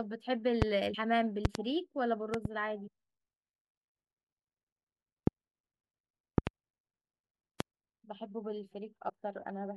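At 0.62 to 0.64 s a loud pop sits about 25 dB above the speech. This is likely a voltage step from a plug, switch, static discharge or driver glitch, shaped by the downstream circuitry into a sharp thump while the speech continues underneath. At 0.93 s the audio jumps forward about 50 ms as compressed frames are skipped. The 26.1 ms spacing points to two missing or rejected frames, and the overlapping neighbours leave a short smeared blip, not a hard click.

The pops repeat. From 1.45 to 1.58 s there is a double pop at about 20 dB above the signal, and from 2.34 to 2.48 s another double at about 15 dB. At 2.86 s a second skip drops about 70 ms, three frames' worth, with the same brief blurred join.

Later pops come at 5.27 to 5.30 s (single), 6.38 to 6.49 s (double) and 7.60 to 7.63 s (single), each about 25 dB above the speech. A final skip at 9.08 s loses about 50 ms, two frames, again as a short smear.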